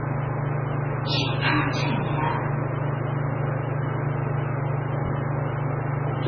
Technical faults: MP3 compression

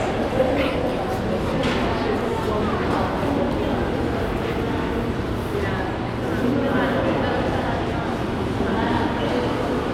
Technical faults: none

